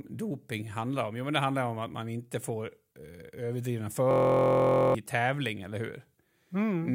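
At 4.11 s the speech locks into a system hang loop that lasts until 4.95 s. The playback side stalled while the audio hardware kept replaying the same ring buffer, so one 23.2 ms slice repeats about 36 times. That length fits a 1024-sample buffer. At that size the repetition fuses into a steady buzz at 43.1 Hz rather than a stutter. When playback resumes, around 0.7 s of the speech is missing.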